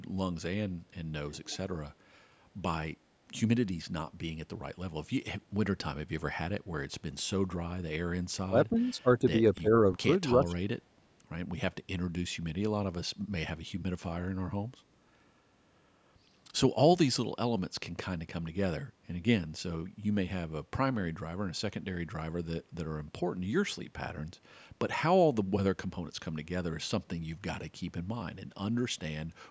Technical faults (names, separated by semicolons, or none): echo leak; speech suppressed in double talk